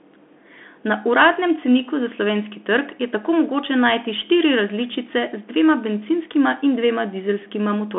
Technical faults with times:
0.00-7.98 Bluetooth CVSD headset codec

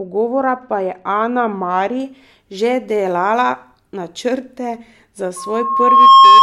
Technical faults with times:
0.00-2.00 de-emphasis applied wrongly
5.36-6.42 loudspeaker feedback squeal

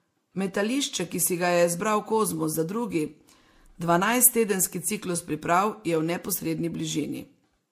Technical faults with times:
0.00-7.71 transcoding between lossy codecs

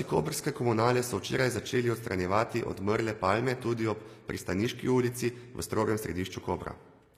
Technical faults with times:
0.00-7.18 HE-AAC compression

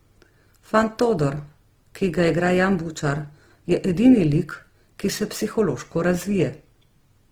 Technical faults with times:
0.00-7.31 Opus compression

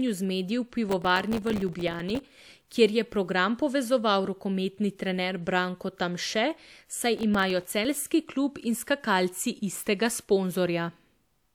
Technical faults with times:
0.89-2.37 processor overload crackle
7.17-7.85 processor overload crackle

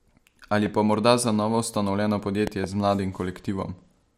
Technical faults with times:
0.66-0.68 loud pop
2.47-2.66 loud pop

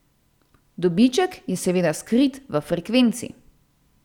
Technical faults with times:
none

